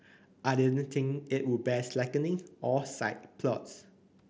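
There are no technical faults to describe in time order in this speech clip.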